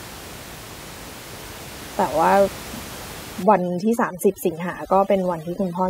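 From 3.43 s to the end at 5.9 s, overdone noise removal takes hold: the denoiser pulls individual frequency bands down hard wherever they sit close to its noise estimate, so the room noise, about 16 dB below the speech, drops and breaks up into twinkling specks, while quieter speech detail is stripped away.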